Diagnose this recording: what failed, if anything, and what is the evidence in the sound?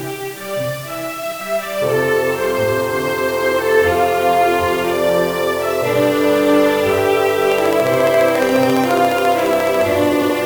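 Sample-format conversion is at fault throughout. The audio has low bit depth with dither, reduced to about 6 bits. Dither turned the rounding error into a steady, even hiss, roughly 20 dB below the signal. There is no grainy distortion, only constant noise.

Frames out of order appear at 1.23 to 1.41 s and again at 10.13 to 10.30 s. This points to the codec or network stage. Two neighbouring runs of about 85 ms were decoded in swapped order. Each run fits four frames. The result is a brief garbled flutter. No time is lost.

A train of clicks runs from 7.52 to 9.82 s. There are about thirty near-identical pulses at a regular 14.4 per second. They peak around 15 dB above the sound and tick over everything. This fits a fault in the analogue wiring, likely interference picked up from nearby equipment.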